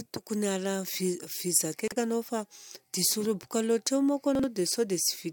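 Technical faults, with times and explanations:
1.88–1.96 s and 4.35–4.44 s, chunks out of order: at each point one block of roughly 43 ms reached the output a single block late and was played after the block meant to follow it. Nothing goes missing, but the audio briefly runs in the wrong sequence and is stitched at three abrupt joins, so each spot sounds like a quick jumbled hiccup, the first just before "anao fa diso roboka".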